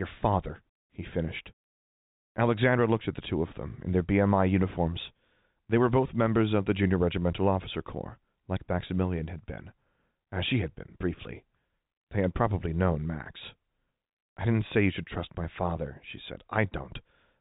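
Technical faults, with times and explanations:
No technical faults can be heard in the speech. It carries the narrow band of G.711 telephone coding, with nothing above 4 kHz and at most a faint hiss that rises and falls with the level.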